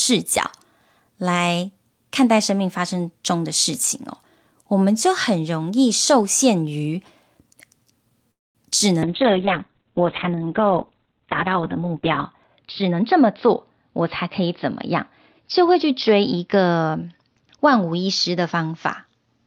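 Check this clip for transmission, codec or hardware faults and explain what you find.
Three transmission faults are present in this speech clip.

Call audio freeze, 8.31 to 8.58 s: a brief fill decays into roughly 0.22 s of silence, likely an empty jitter buffer, then the speech resumes intact.

Call bitrate drop, from 9.05 s to the end: the encoder falls from 40 to 6 kbps, bandwidth narrowing from 20 kHz to 4 kHz. The speech turns muffled and coarse, worst for about 3.2 s.

Jitter buffer speed-up, 12.79 to 14.95 s: the receiver trims short pitch-period segments, roughly a fifth of a second in total, so the speech runs at 109% speed without a pitch change.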